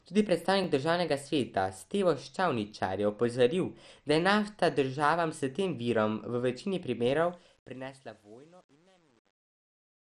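Speech runs throughout with a dull, gurgling and granular texture, and nothing is heard above about 13.6 kHz. The likely cause is MP2 compression. MPEG Layer II divides the signal into 32 sub-bands and shares a bit budget among them. At a rate that fits 64 kbps there are too few bits to go around, so the top bands are shut off and the remaining ones are coarsely quantised. That produces the plainly audible grit and dullness here. At 0.64 s there is a tiny stutter that comes across more as a click or brief buzz than a repeated sound. This is a repeated buffer. Fresh audio arrived late, so the playback device played its last block once more, joining the two copies with a hard edge. Because the repeated piece is so short, consistent with a 10 ms buffer, the repeat is too brief to hear as a separate sound, and almost no audio is lost. The clip then fades out, and from 7.21 s to the end that fade picks up a rough, gritty quality. 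This becomes worst from 7.66 s. That is truncation distortion on a fade. The gain stage kept too few bits and added no dither, which points to about 9-bit resolution. As the level sinks toward the smallest step, the waveform collapses into a few coarse steps instead of fading cleanly.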